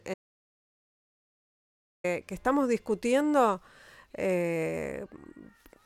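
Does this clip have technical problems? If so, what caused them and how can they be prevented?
Yes. There is an audio dropout to silence from 0.14 s to 2.04 s. The speech starts, then cuts out almost at once. For about 1.9 seconds there is nothing at all, not even room tone. Then the speech resumes mid-flow. Whatever was said in that gap is lost. The likely cause is a brief loss of input, such as a loose connection or a momentary mute, while recording continued. Secure cables and monitor the input live during recording.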